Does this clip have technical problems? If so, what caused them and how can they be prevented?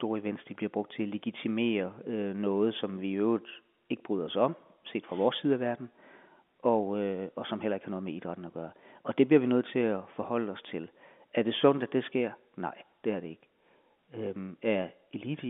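No, there are no technical faults in this speech: it sits in the ordinary telephone band of about 200 Hz to 3.5 kHz that G.711 telephone coding produces, and nothing in the audio needs preventing.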